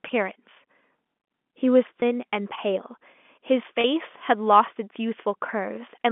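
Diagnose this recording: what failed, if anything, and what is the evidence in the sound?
Packet loss with pitch repetition at 2.00 to 2.02 s and 3.81 to 3.84 s: the network dropped audio for 20 ms and then 30 ms, consistent with 10 ms packets. Each time the receiver's concealment repeated the last pitch period, so the speech briefly holds with a slight buzzy steadiness before resuming within the telephone band.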